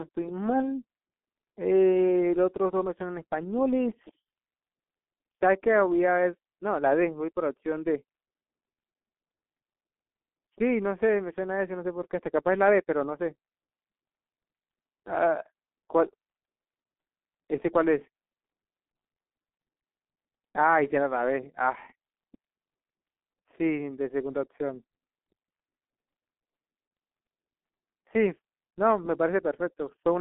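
Muffled, hoarse speech runs throughout, with blurred consonants and nothing above about 3.8 kHz. The narrow 200 Hz to 3.5 kHz band and heavy smearing are typical of the G.723.1 codec, whose slow 30 ms voice-model updates fit a rate near 6 kbit/s.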